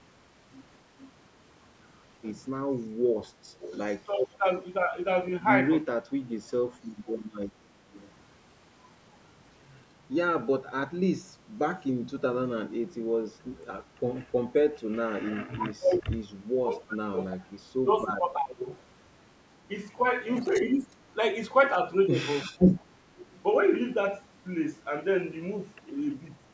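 Echo leak at 3.21–3.97 s: a faint copy of the speech returns 342 ms late, about 15 dB down, likely because the far end's echo canceller let loudspeaker pickup through. Speech suppressed in double talk from 3.53 to 6.4 s: likely with both sides talking, the canceller turned the speech down in pieces, up to roughly 25 dB, for about a second in total. The quieter echo, about 25 dB down and still 342 ms late, returns at 6.48–8.09 s. Suppression recurs at 15.24–18.67 s for around two seconds, then echo at 20.55–20.59 s. Suppression returns at 20.72–22.88 s for under a second, and echo at 23.17–23.4 s.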